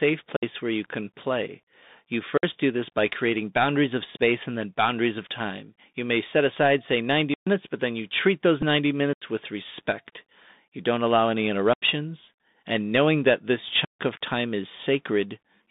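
Throughout, the audio passes through a Bluetooth CVSD headset codec, a narrowband link whose one-bit up-or-down coding at 64 kbps cannot track fast changes. The speech is confined to roughly 150 Hz to 3.7 kHz, sounds thin and muffled, and carries a plainly audible granular hiss with gritty, scratchy sibilants.

The output buffer was likely left unfilled repeatedly, so blocks of digital silence replace the speech with abrupt cuts. The first comes at 0.36 to 0.43 s, a 63 ms hole just before "where you can play". The next is at 2.38 to 2.43 s, 56 ms, ahead of "do this by creating". A longer 128 ms dropout follows at 7.34 to 7.47 s.

At 8.62 to 8.64 s the Bluetooth headset packet repeated. After about 7.5 ms of voice data was lost, which points to two lost packets, the headset chip decoded the previous packet again. Because the repeat lasts only briefly, it is over in about 7.5 ms rather than forming a sustained buzz.

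The silent blocks then continue: 85 ms at 9.13 to 9.22 s, just before "with respect", another 85 ms at 11.73 to 11.82 s, and the longest, 146 ms, at 13.85 to 14.00 s. The two identical 85 ms gaps fit a 4096-sample buffer missing its deadline.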